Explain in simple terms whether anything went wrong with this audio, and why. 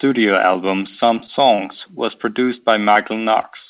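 Yes, three things went wrong. The audio came through a call connection that drops everything above 4 kHz, so it sounds a little dull.

From 1.06 to 1.68 s, just before "was produced", there is repeated packet loss (robotic sound). Several short gaps, the longest about 26 ms, were patched over, so it sounds choppy and robotic.

At 2.93 s, just after "was produced", a short concealed packet loss briefly smears the sound. About 20 ms never arrived and was filled in with a guess.

At 3.41 s, a short stall from a late packet holds one sound about 18 ms too long. The receiver waited for the packet, so nothing is missing.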